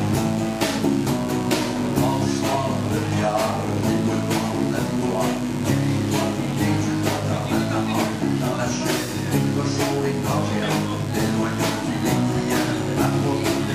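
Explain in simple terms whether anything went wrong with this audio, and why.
A mains buzz runs under the sound from start to finish: a steady, raspy hum at 50 Hz plus its higher harmonics. It comes from electrical interference, perhaps a dimmer or poor shielding, and it's quite noticeable, sitting not far below the actual sound.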